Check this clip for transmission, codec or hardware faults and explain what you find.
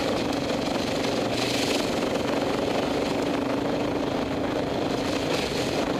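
Nothing wrong can be heard anywhere in this clip.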